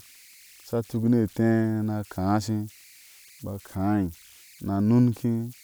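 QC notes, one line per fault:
Throughout: converter idle tones. A tone around 2 kHz sits in the pauses between phrases, and the quieter passages carry a grainy texture beneath the speech, at about 29 dB below the signal. An undithered delta-sigma converter settles into repeating bit patterns whenever its input is small, and those patterns produce the tone. On a spectrogram this shows as a thin horizontal line near 2 kHz, clearest in the gaps, with speckled noise under low-level speech.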